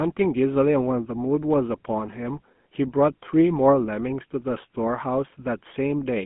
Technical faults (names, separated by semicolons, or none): GSM full-rate codec